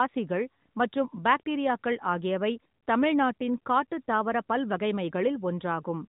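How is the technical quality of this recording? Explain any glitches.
The technical quality is sound, and there are no glitches to explain.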